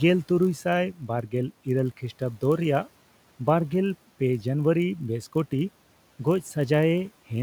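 From 0.34 s to the end, a steady buzz at 46.9 Hz runs under the speech, which plays about 0.1% slow at normal pitch. This is a padded block size mismatch: each block reaching the next stage is slightly short and filled out with zeros, fitting 1024-sample reads, so a tiny gap recurs every block.

Between 0.94 and 1.33 s, parts of the speech turn faint and swallowed, dropping by up to about 10 dB for roughly 150 ms in total. This is speech cut by the noise suppressor, which mistook those quieter speech sounds for background and turned them down along with the room noise sitting about 27 dB below the speech.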